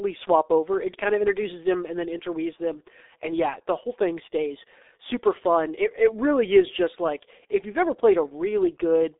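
The whole recording went through a G.723.1 codec, the low-rate internet-telephony coder. It squeezes the signal into 30 ms frames at a rate that sounds like its 6.3 kbit/s mode, on a telephone line band of roughly 300 Hz to 3.7 kHz, with nothing above 3.8 kHz. Heavy coding damage throughout makes the speech muffled and hoarse, with smeared consonants.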